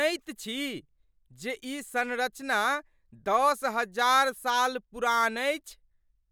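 No technical faults can be heard anywhere in the speech recording. Nothing in it needs a timestamp or a comment.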